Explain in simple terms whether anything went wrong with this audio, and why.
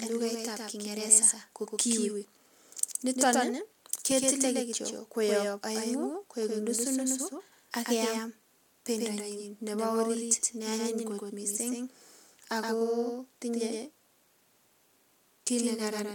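The same speech was likely captured twice, once by a slower path. This doubled audio track plays a quieter copy about a tenth of a second behind, throughout.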